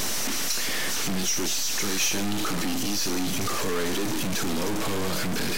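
From start to end, the speech carries distortion, and the pauses fill with noise. This is a stuck bit, likely one data line frozen at a fixed value.

From 2.12 to 2.58 s come four CD scratch ticks, each a couple of milliseconds at most. Damaged disc data beat error correction, leaving brief clicks.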